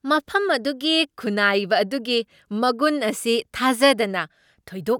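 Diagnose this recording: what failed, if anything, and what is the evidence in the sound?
Nothing failed here; no stage shows a fault.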